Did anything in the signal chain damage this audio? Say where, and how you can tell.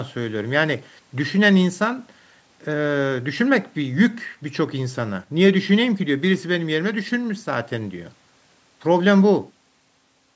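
No, nothing in the chain damaged this speech: it passed through ordinary call microphone processing, whose high-pass filter trims the lowest bass as intended, and the band stops at 8 kHz, which is normal for that path.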